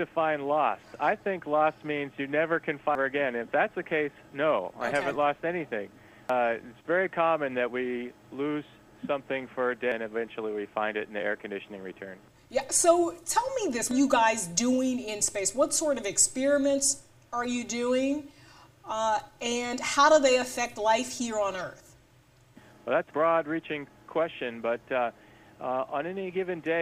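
At 2.95, 6.30, 9.92 and 13.91 s the audio has brief blips that mark damaged data in a compressed stream. At each point corrupted bytes made the decoder misread frames, lose sync and hunt for the next valid frame header. The result is a short chirp, squawk, click or hole.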